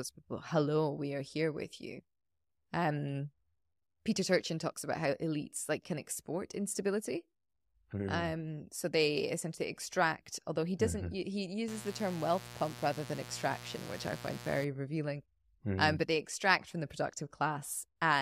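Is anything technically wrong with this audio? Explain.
Yes. From 11.68 s to 14.65 s the speech carries mains buzz. Sharp switching spikes leak into the signal twice per 60 Hz cycle, stacking harmonics into the kilohertz range. The result is a steady, raspy buzz, roughly 15 dB below the speech.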